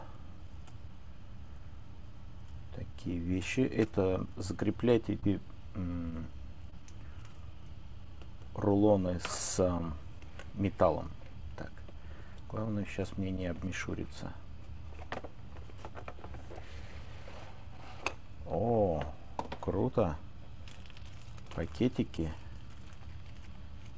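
Short concealed packet loss at 5.20–5.24 s and 6.70–6.74 s: roughly 20 ms of audio each time arrived too late, so the receiver extended the preceding sound to bridge the gap, leaving a brief smear. This is on a call path with nothing above 8 kHz, which fits a G.722 wideband codec.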